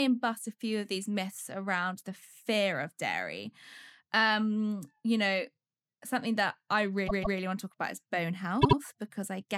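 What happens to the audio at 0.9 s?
Nothing goes wrong at 0.9 s: the audio runs on intact through that point, with no dropout, click or other fault.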